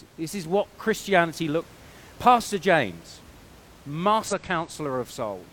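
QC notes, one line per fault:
1.58–1.62 s and 4.28–4.33 s, damaged data in a compressed stream: brief glitches where corrupted frames are misdecoded or refused before the decoder resyncs, heard as a chirp, squawk, click or short hole.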